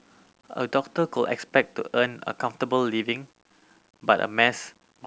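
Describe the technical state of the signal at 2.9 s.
At 2.9 s, as throughout the clip, the speech was likely reduced to 10 bits by rounding with no dither. The error follows the signal, so quieter syllables turn gritty, with grainy distortion sitting roughly 40 dB below the speech.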